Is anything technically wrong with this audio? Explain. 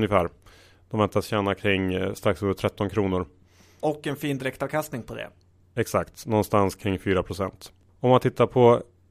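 No, nothing is technically wrong with this audio.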